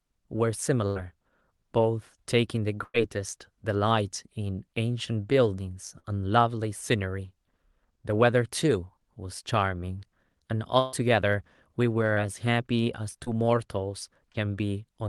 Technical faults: burst of packet loss; short concealed packet loss

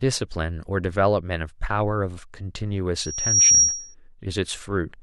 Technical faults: loudspeaker feedback squeal

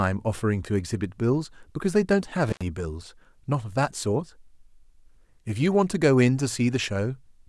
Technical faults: intermittent contact

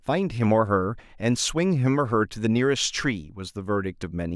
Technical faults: none

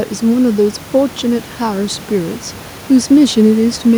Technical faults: none

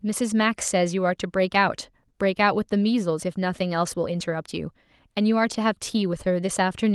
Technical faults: lost packet rebuilt from error correction

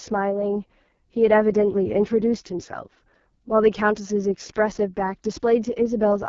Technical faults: AMR wideband (HD Voice) codec

